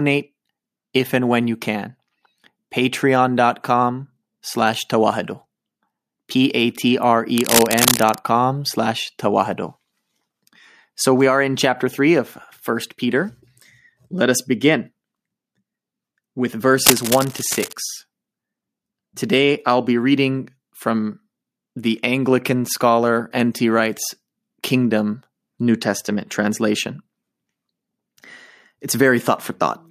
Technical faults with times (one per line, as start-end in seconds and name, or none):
7.36-8.18 cable scratch noise
16.85-17.73 cable scratch noise